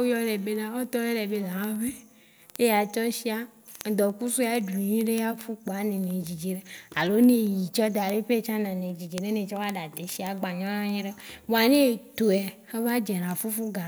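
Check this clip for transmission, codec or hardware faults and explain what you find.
There is one hardware fault: word clock ticks run from 0.16 s to 13.86 s. The receiving device's clock isn't locked to the sender's and runs off by roughly 400 ppm, so a single sample is slipped roughly every 50 ms. That gives a steady train of about 200 sharp ticks of uneven strength under the speech. On a spectrogram they show as evenly spaced thin vertical lines, and on the waveform as tiny step discontinuities.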